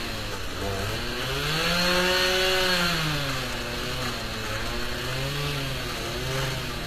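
Throughout, the top end stops near 14.9 kHz, and the rebuilt treble sounds plainly gritty and metallic. This is likely HE-AAC compression at a low bitrate, around 24 kbps.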